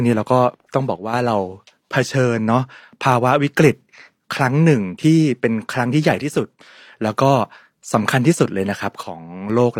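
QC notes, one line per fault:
0.96–1.14 s, 6.22–6.60 s and 9.03–9.50 s, one channel drops out: the speech drops abruptly by about 6 dB rather than to silence, then snaps back, likely from one stereo side going missing before the mono sum.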